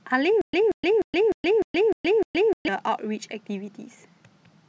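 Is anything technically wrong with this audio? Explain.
Yes. From 0.41 to 2.68 s there is stutter with silent gaps: a 181 ms burst of speech repeats seven times, each followed by 121 ms of digital silence, likely a stalled stream replaying its last fragment.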